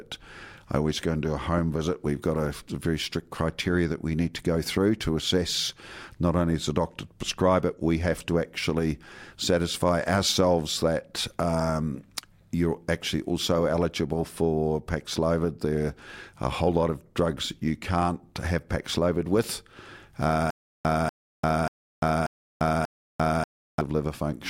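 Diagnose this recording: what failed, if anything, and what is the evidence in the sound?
A stutter with silent gaps from 20.51 to 23.81 s, likely a playback or stream stall. A 242 ms fragment of speech repeats five times. Each is followed by 345 ms of digital silence, every 587 ms. The speech that belonged in that span is lost.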